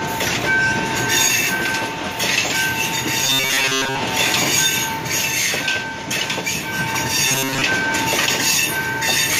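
From 3.24 to 4.02 s, and again from 7.28 to 7.62 s, the sound turns into a rigid metallic buzz at 134 Hz. This robotic sound from repeated short buffers likely comes from one roughly 7.5 ms slice being looped while most of the real audio is skipped.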